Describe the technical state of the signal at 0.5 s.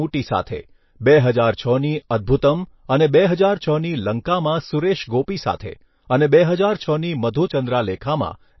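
Around 0.5 s the speech carries a pre-echo from 0.42 to 0.47 s, a smear of hiss about 49 ms long that runs up to the attack that follows it. The encoder spreads quantisation noise across its whole transform block, so noise sized for the loud onset also fills the quiet stretch before it. Unlike a click or a separate noise burst, this hiss is tied to the attack, and the attack itself sounds soft and smudged rather than crisp.

The moment also sits inside audio with plainly audible damage that is likely from MP3 compression at a low bitrate, around 27 kbps. Nothing is present above 5.8 kHz, so sibilance loses its bite, and weak frequency lines switching on and off between frames give a watery, swirling texture. That swirl distinguishes it from a simple low-pass filter, which would dull the top without this shifting, metallic quality.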